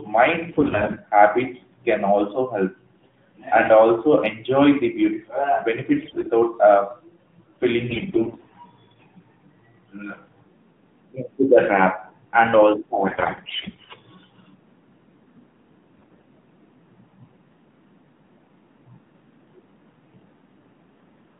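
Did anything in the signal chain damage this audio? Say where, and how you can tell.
Yes. The damage happened in the network stage: AMR bit errors in five bursts, at 0.48–0.98 s (ending just before "habits can also help"), 6.02–6.30 s, 7.90–8.54 s, 13.08–13.91 s (right after "trap and also"), and 15.98–16.26 s. In each burst the speech keeps its pitch and loudness but turns hoarse, scratchy and gargly, with a heavy share of flipped bits. That points to corrupted but still-accepted AMR frames. The excitation pulses are misplaced and the fine gain and spectral values are wrong. Packet loss would sound different: concealment would leave gaps, fades or repeated sound, and none of that is present here. The underlying 150–3500 Hz narrowband line, with only a light codec texture, fits AMR-NB at 12.2 kbps.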